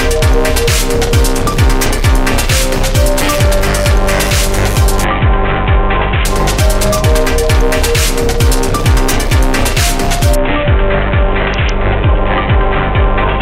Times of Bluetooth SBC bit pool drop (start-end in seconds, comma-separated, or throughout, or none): 5.04-6.25, 10.35-13.41